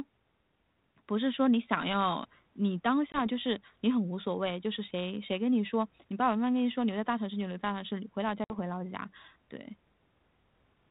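Packet loss on an ADPCM call appears at 3.12 s and again at 8.44 s in this speech. The first gap is a hard-edged 20 ms silence, about one packet's worth. The second runs 60 ms, roughly three packets. Because G.726 ADPCM codes only differences from an adaptive prediction, the decoder's predictor and step size lose track of the sender's across each hole. The speech resumes slightly distorted, settling by about 3.22 s and 8.56 s respectively. The codec's light damage and narrowband sound fit 32 kbit/s.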